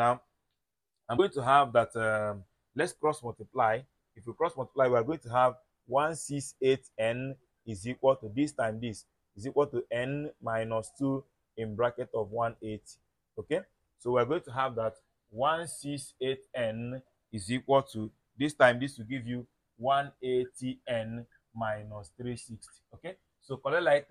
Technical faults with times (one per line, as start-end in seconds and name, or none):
1.16-1.19 broken MP3 bit reservoir